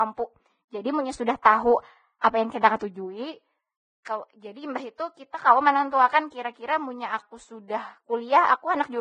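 Speech that sounds hissy and grainy throughout, with nothing above 9.7 kHz and a roughened, smeared quality on voiced sounds. This points to heavy Vorbis compression as the likely cause, at a bitrate down around 18 kbps. At that rate the encoder keeps only a coarse spectral floor and quantises the residue so harshly that fine treble detail is replaced by noise of similar energy. It also imposes the low cut-off heard here.

Pre-echo, a direct consequence of that block-based coding, appears at three onsets: 1.42 to 1.45 s, 2.21 to 2.24 s just before "apa yang", and at 4.05 s just before "jadi imbah itu". Each sharp attack falls late in a transform block. The quantisation noise sized for the loud part then spills into the quiet moment before it, giving a brief hiss of about 15 to 32 ms ahead of the onset and softening the attack itself.

Two sections are slowed and lowered in pitch together. 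From 2.83 to 3.71 s, and again from 7.18 to 7.90 s right after "kira munnya", playback runs about 5.7% slow and drops 101 cents, roughly a semitone. The pitch then snaps back to normal. This is likely a drift correction step, where clock-matching software changes the playback rate in a single jump to refill its buffer rather than adjusting gradually.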